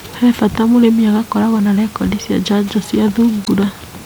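Damaged data in the compressed stream makes the decoder lose sync at 3.44 to 3.48 s, after "rekondi cia njanjo cia", producing a short garbled blip.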